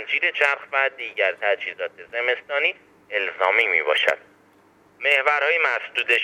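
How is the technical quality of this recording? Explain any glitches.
No glitches or technical faults can be heard anywhere.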